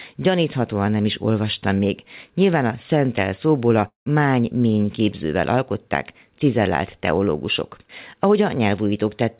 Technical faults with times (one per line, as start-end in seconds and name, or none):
3.88-4.08 long network dropout